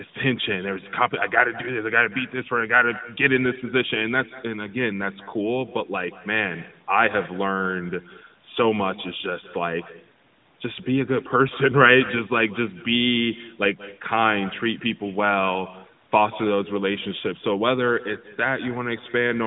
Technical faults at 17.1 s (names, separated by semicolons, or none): echo with no canceller